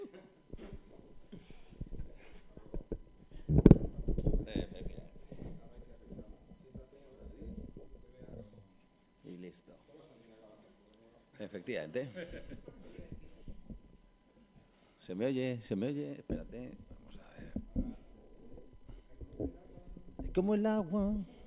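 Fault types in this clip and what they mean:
No faults turn up anywhere in this one, so there's nothing here to list or explain.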